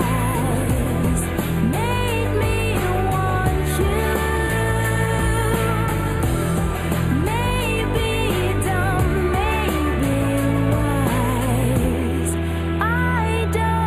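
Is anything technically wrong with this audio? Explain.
Yes. Throughout the clip there is channel delay (comb filtering): one channel arrives roughly a tenth of a millisecond late, which fits an offset of a few samples, and the two channels are then summed to mono. Content common to both cancels at evenly spaced frequencies, starting around 5 kHz. The result is a fixed notch pattern in the upper range, giving the sound a hollow, phasey and dulled top end that does not move over time.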